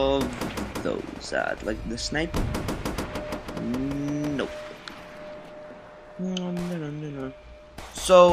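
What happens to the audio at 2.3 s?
Nothing goes wrong at 2.3 s; the audio plays through that moment intact, with no dropout, click or other disturbance.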